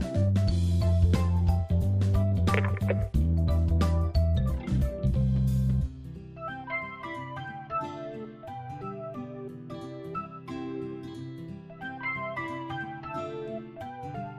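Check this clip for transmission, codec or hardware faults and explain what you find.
No transmission, codec or hardware faults were found.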